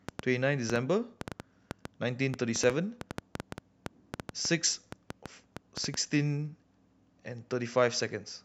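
From 0.09 s to 5.95 s a train of clicks runs over the speech: around thirty short, near-identical pulses at about 5.5 per second, spaced unevenly rather than on a steady beat. They peak roughly 15 dB above the speech, so they stand out as sharp ticking and popping, audible in the pauses as well as under the voice. The likely cause is interference from nearby equipment or a faulty connection or power supply injecting impulses into the signal path.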